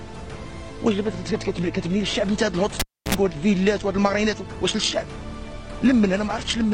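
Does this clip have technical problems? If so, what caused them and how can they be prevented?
Yes. From 2.80 to 3.15 s, a live cable is pulled and plugged in again. There's a pop, about 0.3 s of near silence, then 61 ms of 60 Hz mains buzz while only the tip touches, and another pop. On a spectrogram, two vertical broadband streaks frame a dark gap containing thin 60 Hz harmonic lines. Mute the channel before repatching.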